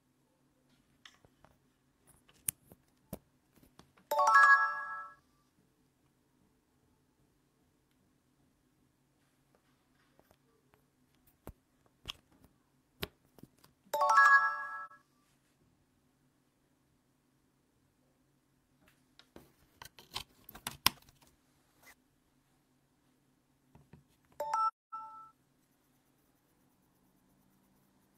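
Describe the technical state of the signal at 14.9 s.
A brief, soft-edged dropout: the sound fades out and back in, leaving a brief dip from about 14.86 to 14.91 s. This is AAC frame loss with muting. The decoder zeroed the missing spectrum, and the overlapping windows smoothed the edges. The roughly 43 ms gap fits a single lost frame.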